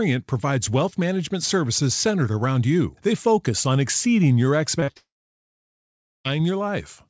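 Right around 4.80 s there's a run of short concealed packet loss: a tiny gap at 4.80 s, then 4.84 to 4.90 s and 4.92 to 4.97 s. Each time the receiver papered over the missing piece by carrying on the last bit of the sound, so you get a quick smeary wobble rather than a clean hole.

Then from 4.97 to 6.27 s everything goes away, most likely a long network dropout. The concealment keeps the last sound going as a fading buzz or hiss for about a tenth of a second, then it's about 1.2 s of near silence before the speech comes back without the lost part. Throughout, the audio has no content above 8 kHz, which fits a G.722 call codec at 64 kbps.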